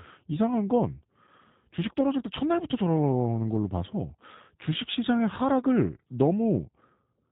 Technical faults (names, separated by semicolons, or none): G.729 codec